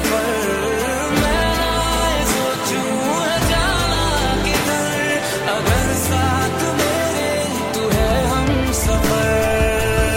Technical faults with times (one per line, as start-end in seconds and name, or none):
none